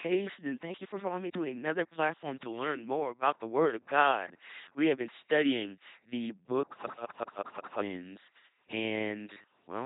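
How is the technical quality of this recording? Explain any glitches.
Poor: the whole clip has the buzzing, mechanical robot quality of an LPC-10 vocoder, with heavy damage from start to finish. Each moment is rebuilt as either a buzzy pulse train or hiss fed through a simple vocal tract filter, so natural voice character is lost, and wrong voicing choices surface as stray buzz or hiss. Nothing is present above 3.9 kHz, and the coarse result fits the 2.4 kbit/s rate this codec runs at.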